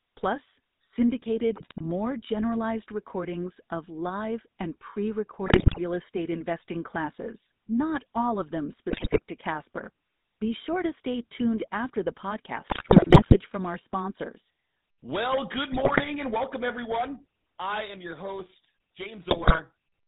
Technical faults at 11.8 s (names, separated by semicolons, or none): GSM full-rate codec